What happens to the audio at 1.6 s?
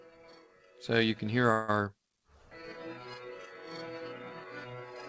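From 1.52 to 1.74 s the last sound drags on as a fading buzz or hiss, then resumes where it stopped with nothing lost: a call audio freeze, likely from delayed packets emptying the jitter buffer.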